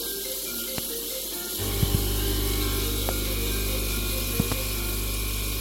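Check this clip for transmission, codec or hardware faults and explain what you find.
Four loud pops break through the sound, at 0.78–0.81 s, 1.83–1.97 s, 3.09–3.12 s and 4.40–4.54 s. The first and third are single pops, and the second and fourth come as quick pairs. Each peaks roughly 15 dB above the surrounding sound, which carries on unbroken underneath. The likely cause is a sudden voltage step or spike, from a connector, switch, static discharge or driver glitch, landing on the signal. Downstream circuitry shapes it into a sharp, thumping click.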